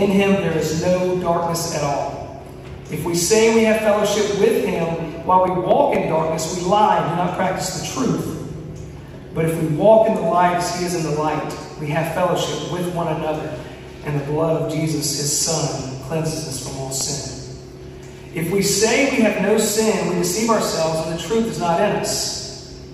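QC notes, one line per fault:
4.52–5.95 s, CD scratch ticks: seven evenly spaced ticks of a few milliseconds, about five per second, of uneven strength, one per disc turn, unlike random clicks.
16.05–17.25 s, CD scratch ticks: six ticks at the same steady rate, of uneven strength, where uncorrectable data is muted or interpolated once per rotation.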